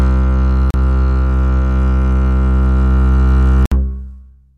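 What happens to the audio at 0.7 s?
Right around 0.71 s the music drops out completely for about 36 ms, to 0.74 s. It's a block of digital silence: a run of samples went silent, most likely because the output buffer wasn't filled in time. There's no fade in or out, so the sound cuts out and back abruptly. At this length it comes across as a short hole in the music.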